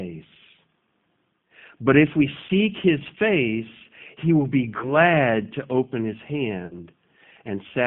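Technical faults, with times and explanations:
throughout: G.729 codec, an 8 kbit/s line squeezed into roughly 150 Hz to 3.6 kHz. The voice is rebuilt from a filter plus a few pulses, so it sounds thin, rough and a bit synthetic.
2.47–2.51 s, 4.78–4.92 s, 6.67–6.77 s: VoIP packet loss concealed by the speech codec, right after "if we", "face he will be" and "to open his". The decoder stretches its last pitch and filter into a buzzy tone or coloured noise that fades, and the voice stays weak for a moment afterwards.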